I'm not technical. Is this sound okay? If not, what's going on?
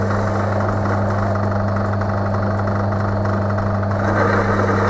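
Yes, no faults: the audio went through a normal internet call connection, which is why nothing above 8 kHz is present, and that is expected for this kind of line.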